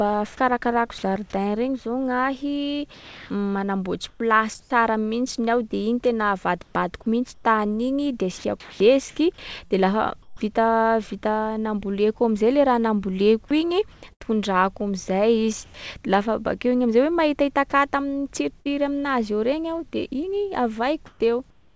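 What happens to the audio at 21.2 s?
At 21.2 s the real background has given way to a smoother, steadier noise bed that differs from the room sound around it. This is comfort noise in place of the background, running from 21.06 s to 21.74 s and covering about 0.38 s within that stretch. The likely cause is discontinuous transmission: the sender's voice detector judged the pause silent and stopped sending, so the receiver synthesised noise shaped to approximate the background, with nothing above 8 kHz, as elsewhere on this call path.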